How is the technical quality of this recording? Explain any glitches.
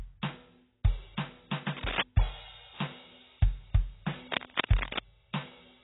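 Quality's poor: the music is heavily squashed by lossy coding the whole way through, and there are two bursts of scratchy noise.

The AAC compression is the big one. Nothing comes through above 3.9 kHz, so everything sounds dull and smeared, which fits a very low bitrate, around 16 kbps. At that rate the encoder is likely dropping the top end and coarsely quantising what's left against its hearing model.

Then there's cable scratch noise from 1.77 to 2.03 s and again from 4.31 to 4.99 s: dense, uneven scratching about as loud as the music itself. That's likely a worn cable, connector or control being moved, so its contact resistance jumps around and injects noise bursts.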